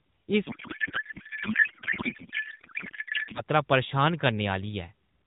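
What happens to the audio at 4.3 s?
Nothing goes wrong at 4.3 s; the speech carries on intact through that moment, with no dropout, click or other fault there.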